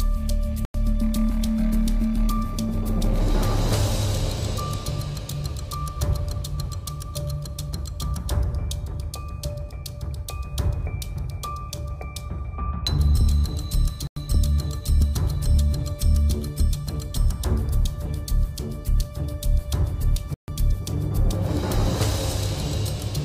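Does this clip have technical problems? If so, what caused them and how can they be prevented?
Yes. Three times the playback or processing chain likely failed to deliver a buffer on time, and a block of digital silence went out in its place, at 0.65 to 0.74 s, 14.07 to 14.16 s and 20.34 to 20.48 s. The first two last about 93 ms each, which fits an unfilled 4096-sample buffer, and the third runs about 139 ms. The sound drops straight to silence and returns with no fade, so each is heard as a short hole. Prevent it by giving the audio thread enough priority and buffer headroom to finish every block before its deadline.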